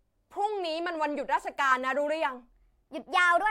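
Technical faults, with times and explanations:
2.52 to 3.50 s, section at the wrong speed: the speech suddenly runs 1.2 times fast and about three semitones higher, likely from playback against the wrong clock.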